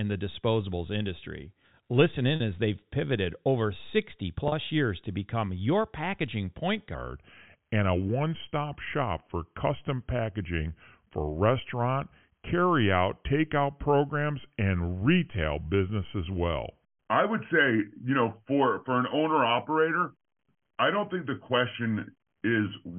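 Speech over a telephone-band line (G.711 A-law, where nothing above 4 kHz comes through) has two brief buzzy catches at 2.36 s and 4.48 s, just before "as they've pivoted over" and "years to become your". This is packet loss with pitch repetition: each time, 40 ms of audio went missing and the receiver filled the hole by repeating the last pitch period. From 6.94 s to the end, right after "become your packaging point", the speech turns slow and deep, about three semitones lower, running at 0.86 times its proper speed. This section at the wrong speed was likely played against the wrong clock.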